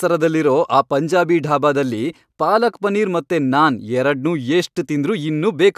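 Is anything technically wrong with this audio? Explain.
No, nothing technically wrong turns up here; the speech comes through with no faults to point to.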